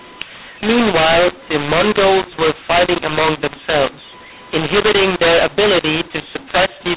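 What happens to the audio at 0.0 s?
From 0.0 s the mu-law and A-law mix-up is already present, and it lasts the whole clip. The speech was coded as A-law but decoded as mu-law. Sample levels come out scrambled. The speech sounds harsh and distorted, and its quietest moments are lifted into audible noise.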